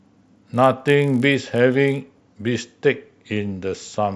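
From 0.0 to 2.6 s, the resampler restarted on every block. Each 20 ms block was converted in isolation, which fits a 48 kHz to 24 kHz rate change, so the filter lacked real neighbouring samples at every edge. The result is a 50 Hz buzz riding under the speech, gone in pauses. A spectrogram shows faint vertical lines every 20 ms; the waveform shows small steps at each block boundary.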